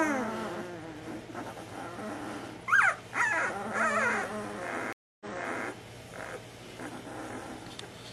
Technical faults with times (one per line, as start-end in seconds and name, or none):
4.93-5.67 stream reconnect